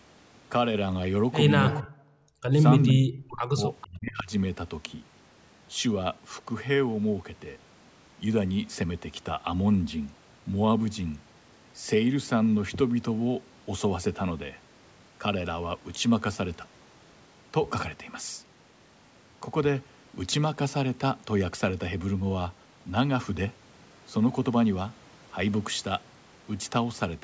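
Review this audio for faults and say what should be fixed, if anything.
Speech suppressed in double talk at 1.8–2.04 s, 2.94–3.62 s and 3.83–4.31 s: the talker's own sound sinks by up to roughly 40 dB, likely because the echo canceller treated overlapping talk as echo. Unlike gating, the wanted voice itself vanishes.

Background gated by the echo canceller at 2.32–2.43 s: only room sound drops, by about 32 dB, then returns as the canceller releases.

Echo leak at 2.88–2.92 s: a faint copy, roughly 30 dB below speech and 450 ms late, is likely residual loudspeaker pickup. It is a repeat, not a dropout.

To prevent these, tune the echo canceller's double-talk detection and residual suppression, or use a headset.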